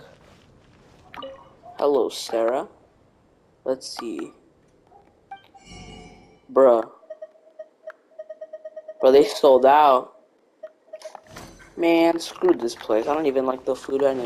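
Nothing in this audio stands out as a technical problem at any point, so there's nothing to flag here.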